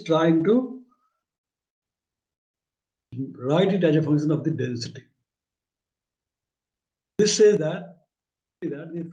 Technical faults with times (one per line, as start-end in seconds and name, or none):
0.87-1.84 repeated stalls (stutter)
2.33-2.56 call audio freeze
4.98-6.33 jitter buffer speed-up